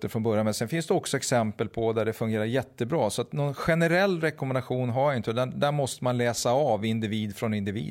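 No audible faults in this speech.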